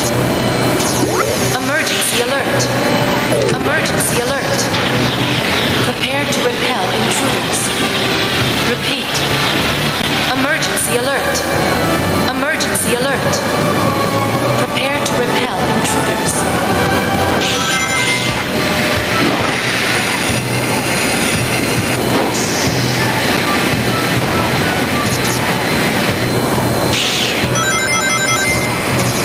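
Gain pumping runs through the whole recording: the gain swells up in the gaps and ducks by around 10 dB under each loud sound, leaving the level squashed. The likely cause is gain set far too high, with a fast limiter clamping down on peaks.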